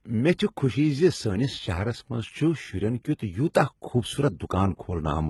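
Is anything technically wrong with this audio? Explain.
Yes. All the way through, the speech shows heavy damage that likely comes from HE-AAC compression. Nothing reaches above 11.8 kHz, and the treble is rebuilt from copied lower bands, so s sounds come out gritty and lispy. That points to a very low bitrate, around 16 kbps.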